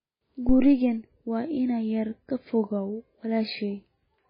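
The whole clip sounds watery and swirly, with nothing above 5 kHz. That points to heavy MP3 compression at a very low bitrate, likely around 16 kbps, where the encoder cuts the treble and lets weak detail flicker in and out.

From 0.49 to 0.85 s there's a phantom power thump: a deep low thud that dies away within about 81 ms. It's the kind of step you get when supply voltage switches on a live input and pushes through the coupling capacitors.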